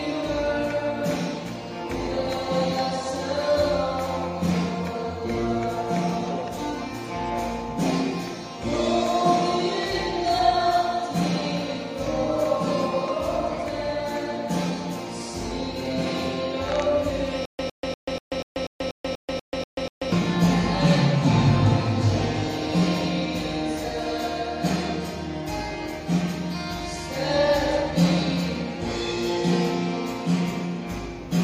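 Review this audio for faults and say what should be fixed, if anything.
From 17.45 to 20.12 s there is a stutter with silent gaps: a 107 ms burst repeats 11 times, each followed by about 136 ms of digital silence, likely a stalled stream replaying its last buffer. Larger playback buffering and underrun handling that conceals gaps, rather than replaying stale fragments, would prevent it.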